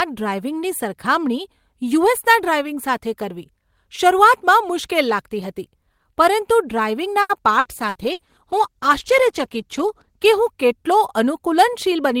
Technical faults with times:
7.21-8.22 repeated packet loss (robotic sound)
7.61-10.41 call bitrate drop

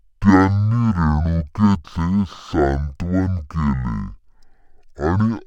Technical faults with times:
0.00-5.47 stereo read as mono

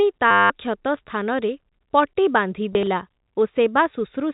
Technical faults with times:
0.31-0.50 packet loss with last packet repeated
2.73-2.87 packet loss with last packet repeated

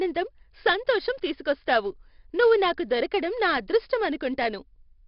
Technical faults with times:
0.00-5.07 4-bit ADPCM compression

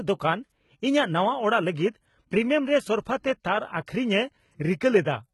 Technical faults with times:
0.00-5.34 HE-AAC compression
3.86 pre-echo

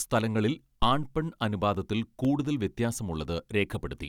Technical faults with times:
0.82-1.17 phantom power thump
1.75-3.75 periodic USB or driver dropouts

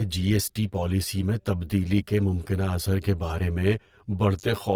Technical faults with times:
0.00-4.76 channel delay (comb filtering)
0.00-4.76 Opus compression

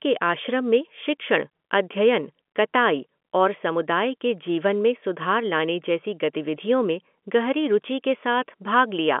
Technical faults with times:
none

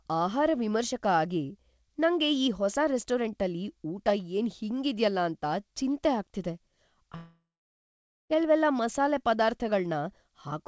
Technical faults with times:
7.16-8.32 long network dropout

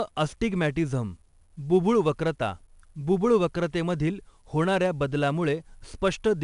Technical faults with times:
0.00-6.43 4-bit ADPCM compression

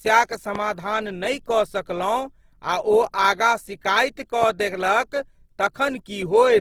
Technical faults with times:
0.00-6.61 Opus compression
0.55-0.57 loud pop
4.43-4.45 loud pop

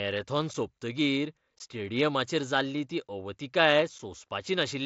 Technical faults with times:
0.54 unconcealed Bluetooth headset packet loss
1.59 unconcealed Bluetooth headset packet loss
3.99 unconcealed Bluetooth headset packet loss

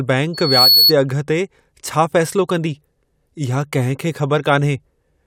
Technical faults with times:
0.33-0.93 loudspeaker feedback squeal

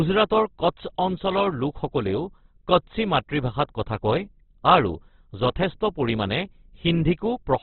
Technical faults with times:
0.00-7.62 Opus compression

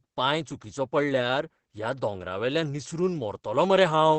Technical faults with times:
0.00-4.18 Opus voice compression

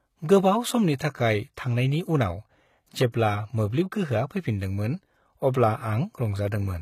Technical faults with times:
0.00-6.81 HE-AAC compression
3.11-3.14 pre-echo

